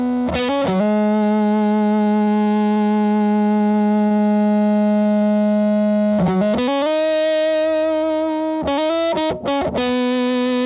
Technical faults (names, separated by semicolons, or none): repeated packet loss (robotic sound); short concealed packet loss